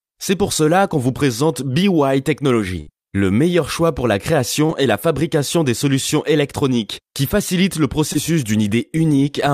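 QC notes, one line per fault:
1.17–1.21 s, 4.67–4.71 s and 8.13–8.17 s: short concealed packet loss. Each time about 20 ms of the speech arrived too late or not at all. The receiver filled the hole by stretching the last sound for 13, 19 and 20 ms respectively, then crossfaded back into the real signal. Each event is heard as a brief smear or wobble, and a short consonant in that spot can drop out.
2.81–2.89 s: burst of packet loss. About 60 ms of consecutive audio went missing. The receiver extended the preceding sound for 60 ms while fading it down, so there is a short held buzz or decaying hiss instead of the real speech. The stream then picks up further along, with that stretch of speech gone.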